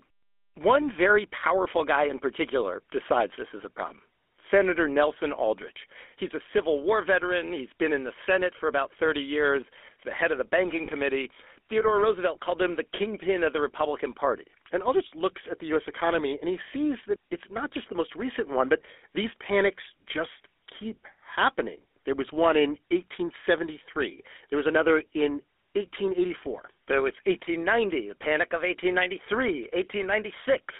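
Speech runs through a GSM full-rate codec throughout, with the band limited to roughly 250 Hz to 3.5 kHz and a plainly audible buzzy, gravelly roughness that fits a 13 kbps full-rate coder. On a spectrogram, nothing shows above 3.5 kHz, and the harmonics look smeared and grainy. Lost GSM frames at 10.86 to 10.90 s cause a brief rough, metallic ring, because the decoder repeats the last good frame's settings for about 20 ms. On the waveform this appears as a short repeated patch, and on the spectrogram as a frozen, smeared slice.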